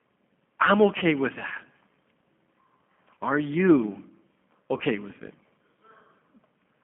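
Throughout, the speech passes through a G.729 codec, consistent with 8 kbit/s G.729A, which rebuilds the voice from a filter, a pitch predictor and a few pulses per frame. The sound is confined to roughly 200 Hz to 3.4 kHz and has a plainly rough, synthetic edge.

At 0.99 s, 3.14 s and 4.77 s there is VoIP packet loss concealed by the speech codec. About 30 ms of audio goes missing each time, which fits a single lost packet. The decoder extends its last pitch and filter and lets the level fall, so each gap becomes a brief, fading stretch of buzzy or noisy sound about 50 to 60 ms long before the voice recovers.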